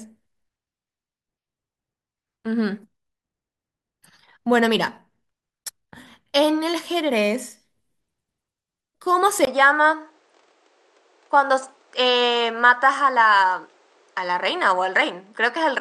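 A speech recording with an abrupt change in character at 9.45 s: after a gap of about 20 ms, the audio continues to the end with nothing above 9.4 kHz, a duller tone, and a new low background noise sitting roughly 40 dB under the speech, while the level stays about the same. The likely cause is an input switched to a poorer device partway through, with the new microphone's narrower band and its own noise floor replacing the original.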